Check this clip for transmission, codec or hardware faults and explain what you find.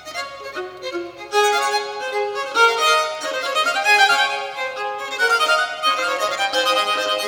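There's one fault, and it sits right at the tail of the clip. From 5.91 s to the end you get overlap-add ripple. The audio was chopped into windowed frames and stitched back together with an overlap that doesn't add up to a steady gain, so the level pumps up and down about 6 dB once per frame, around 200 times a second. To the ear that's a metallic buzz with extra tones around each note in that stretch.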